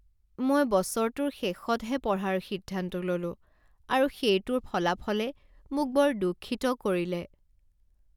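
No technical faults can be heard anywhere in this recording.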